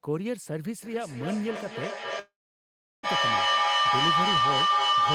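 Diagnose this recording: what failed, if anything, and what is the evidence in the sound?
An acoustic loop between two devices on the call gains level: feedback howl near 1 kHz from 0.83 s, with the loop repeating roughly every 0.3 s, peaking about 8 dB above speech.

Audio stops arriving at 2.19 s, likely a long network dropout: 0.84 s is lost, a 0.84 s fading fill, 0.73 s of it silence, until 3.05 s.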